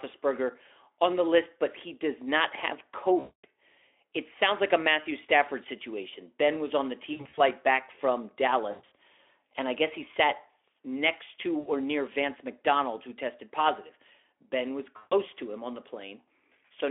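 VoIP packet loss concealed by the speech codec shows up five times: at 3.19 s after "he does not have", 7.13 s after "was on the", 8.71 s after "back from", and at 11.59 s and 14.97 s. Each time the decoder keeps replaying its last pitch and lets it fade, so gaps of 60 to 240 ms come out as a smeared buzz or a fading coloured noise. The voice then stays thin for a moment after the packets return.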